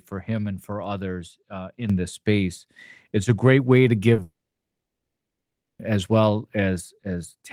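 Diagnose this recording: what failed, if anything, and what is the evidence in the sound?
At 1.90 s, right after "and for others uh", the sound and its background noise step up together by about 8 dB and stay at that higher level to the end. Because the step is instantaneous and lifts everything equally, it is a sudden gain jump rather than someone moving closer. The likely cause is a digital gain change in the call-processing or driver stage, applied from one sample to the next with no ramp.

Around 4.14 s, 4.16 to 4.19 s, and 4.20 s the audio briefly smears and wobbles. These are short concealed packet losses of about 10, 20 and 10 ms. Those slices never reached the decoder in time. The receiver filled each gap by extending the preceding sound and then blending back into the real signal. This is a network problem, with the codec's concealment covering it.

From 4.22 s the sound trails off into a short fading continuation. 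Then it goes silent for about 1.5 s, and audio resumes at 5.80 s without the missing stretch. This is a long network dropout. Nothing arrived for about 1.6 s, so the concealment held the last sound briefly, gave up, and fell to silence. The cluster of short losses just before it points to a likely burst of congestion or a link interruption.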